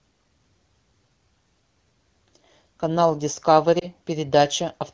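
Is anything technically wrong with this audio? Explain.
Yes. Lost AMR speech frames occur around 3.79 to 3.86 s, a brief dip or warble that fits a single lost 20 ms frame. The decoder bridges it by repeating the last good pitch and vocal-tract settings at reduced gain. Unlike a plain dropout, there is no hard silent gap. The surrounding AMR-WB (HD Voice) coding at 12.65 kbit/s shows only light codec colouring.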